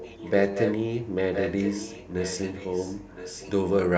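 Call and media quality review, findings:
Echo leak, 0.0–0.31 s, 0.51–0.74 s, 1.34–3.51 s: delayed copy of the speech about 1.0 s behind, roughly 15, 5, then 10 dB down. Likely residual echo from a far-end loudspeaker past its canceller. Spectrogram shows repeated harmonic patterns offset one second.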